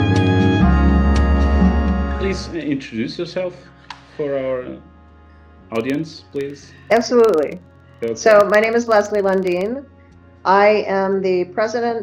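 Filter restarted on every block, 5.71 to 9.76 s: each block starts from cleared filter state, leaving a 21.5 Hz tick-buzz tracking the level, which fits 2048-sample blocks.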